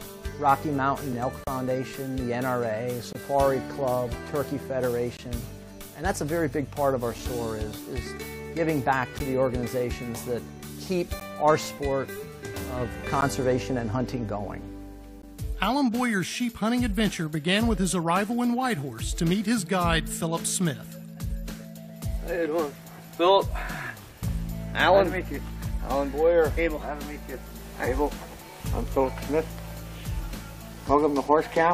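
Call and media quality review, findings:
Gap between stream segments: hard-edged silent holes at 1.13, 3.13–3.15, 5.17–5.19, 9.19, 11.20, 13.21, 15.22 s, about 4 to 20 ms each. Spacing fits 2 s segments. Timestamp mismatch at segment joins, player pads with silence. No audio lost.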